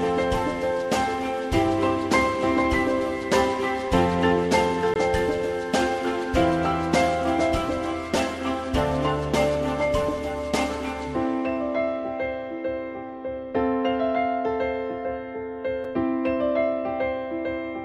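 At 4.94 s and again at 15.84 s the sound drops into a block of digital silence, about 20 ms and 5 ms long, most likely because the output buffer went unfilled in time. The abrupt cut to silence and back, with no fade, makes the longer gap a short hole and the shorter one a tick or dip.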